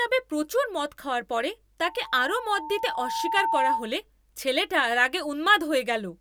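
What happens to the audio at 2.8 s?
At 2.8 s a loudspeaker feedback squeal is sounding, from 1.84 to 3.93 s. The microphone hears its own loudspeaker, and the loop gain passes one at 900 Hz. That tone swells over about two seconds and rises a little above the speech.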